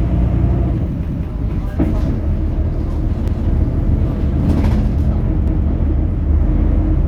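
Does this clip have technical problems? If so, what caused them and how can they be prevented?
Yes. Overlapping chunks cause a stutter at 1.08, 3.28 and 5.48 s, where 200 ms of sound replays at each join of 2-second chunks. A waveform shows the repeated segment twice in a row. Aligning chunk boundaries so each starts exactly where the previous ended prevents it.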